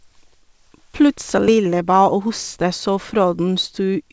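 Around 1.48 to 1.50 s there's a skip ahead: roughly 0.7 s of queued speech was dropped, so playback leaps forward with no gap filled in. Right after, from 1.58 s to 4.10 s, a jitter buffer speed-up trims little pitch-period slices to shed the extra delay, so the speech runs about 9% fast at unchanged pitch and sounds a bit rushed. The call path caps everything near 8 kHz, which fits G.722.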